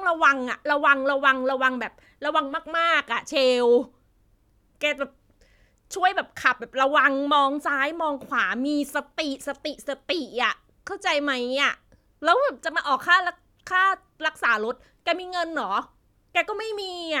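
No technical faults can be heard anywhere in the recording; the speech signal stays steady and intact throughout.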